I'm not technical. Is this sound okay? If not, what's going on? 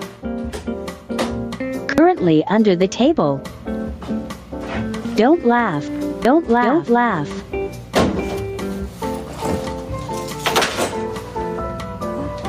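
No. Throughout the clip, loud and soft parts end up closer in level, so everything feels squashed. This is gain pumping, likely from the recording level being set far too high and an automatic limiter repeatedly pulling it down hard.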